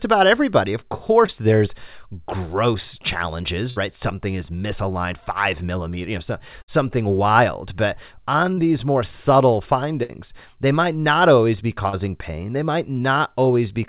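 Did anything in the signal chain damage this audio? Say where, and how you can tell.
Yes. The damage happened on the network, upstream of a G.711 A-law call path whose 4 kHz band limit fits a 64 kbps stream. The first fault is short concealed packet loss, heard as brief smears or wobbles at 1.26–1.30 s, at 8.54–8.59 s just before "these more subtle", and at 11.89–11.95 s just after "might not always be". In each case 20 to 40 ms of speech failed to arrive in time. The receiver filled the hole by extending the preceding sound, then crossfaded back into real audio.

The second fault is a burst of packet loss. It is longer and sounds like a held buzz or fading hiss, after which the speech jumps ahead. This happens at 3.70–3.78 s, at 6.62–6.70 s right after "millimeter you know so", and at 10.03–10.11 s. Each time, about 60 ms of consecutive audio was lost. Concealment stretched the last sound across the gap while turning it down, so the missing stretch is simply gone rather than repaired.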